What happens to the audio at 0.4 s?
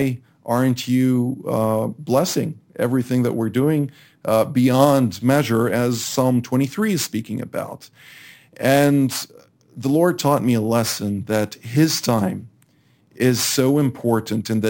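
A bright, metallic fizz rides on the speech at 0.4 s and rises and falls with it. Its lowest mirror copy sits at about 11.03 kHz to 22.05 kHz, roughly 21 dB below the signal, and moves opposite to the pitch. This is imaging from sample-and-hold upsampling, present throughout the clip. Each sample was repeated with no smoothing filter, which fits a rate doubled from about 22 kHz to 44.1 kHz, so a mirrored copy of the spectrum folds up above the old band.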